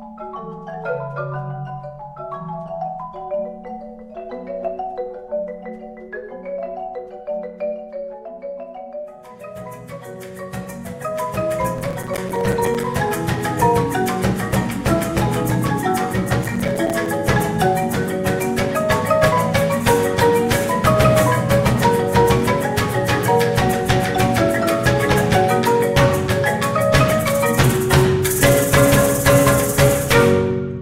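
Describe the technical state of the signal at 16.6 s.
At 16.6 s the processor is overloaded and missing its buffer deadlines over and over, from 16.43 to 17.06 s. Each missed buffer of roughly 5 ms drops out to silence with hard edges, and around fifteen such gaps together produce a gritty processor overload crackle.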